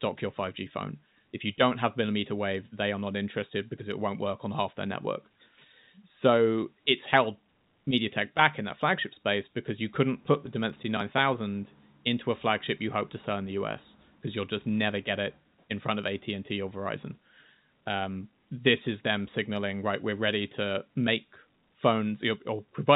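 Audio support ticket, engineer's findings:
No faults found in this speech.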